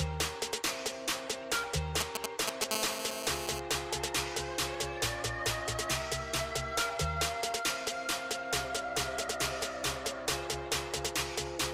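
From 2.01 to 2.64 s there's a burst of GSM signalling interference: a galloping dit-dit-dit of short raspy buzzes, sitting a little above the level of the wanted sound. That's a nearby 2G handset doing its housekeeping, sending brief clusters of radio bursts at a 217 Hz frame rate while it talks to the network. Some stage in the audio chain is rectifying that RF, so each cluster lands as a chopped-up snatch of buzz.

Right after, from 2.71 to 3.60 s, it settles into the full GSM phone buzz: a continuous, hard, raspy drone at 217 Hz with a thick stack of harmonics, about 3 dB below the signal and completely unrelated to it. This is the pattern of the handset in an actual call, transmitting steadily 217 times a second. The same rectification in the audio path turns that steady pulse train into an audible buzz for nearly a second.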